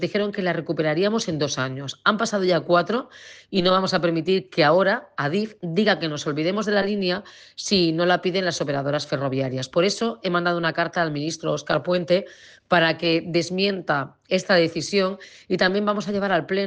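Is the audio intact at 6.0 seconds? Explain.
Yes, the audio at 6.0 seconds is intact, with no dropout, click, distortion or other fault at that moment.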